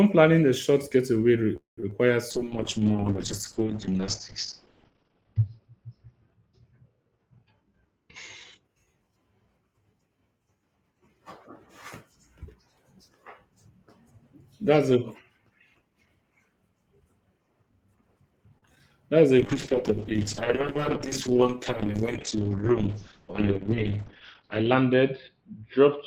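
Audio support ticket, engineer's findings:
Call audio freeze, 1.56 to 1.78 s: about 0.21 s inserted, the tail of the last sound fading out, then roughly 0.14 s of dead silence before it resumes where it stopped, nothing lost. Likely packets held up in transit, jitter buffer ran dry.

Short concealed packet loss at 1.80, 1.90 and 18.75 s: tiny smears or wobbles right after the freeze and again after the stall. A few hundredths of a second never reached the decoder, so the receiver extrapolated the previous sound and crossfaded back into the real stream.

Call bitrate drop, 2.31 to 8.70 s and 19.40 s to the end: speech goes watery and muffled. Encoder pushed from 32 down to 11 kbps after the bandwidth estimate fell, and the audio band narrows from 20 kHz to 6 kHz. Bottomed out for about 3 s the first time and about 5.4 s the second.

Jitter buffer speed-up, 7.42 to 9.12 s at 112% and 20.63 to 21.30 s at 105%: speech rushes but keeps its pitch. 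The buffer was overfull, so the receiver snipped out pitch-period chunks, roughly a fifth of a second in the first stretch and a few hundredths in the second.

Short stall from a late packet, 18.58 to 18.63 s: one sound hangs about 38 ms too long with a faint buzzy dip. The packet wasn't there on time, so the last sound was stretched until it arrived, then playback picked up where it left off.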